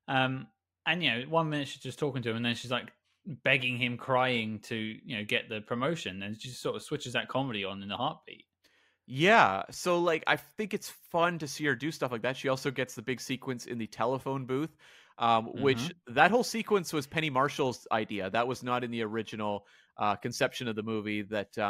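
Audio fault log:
No faults heard anywhere in this speech recording.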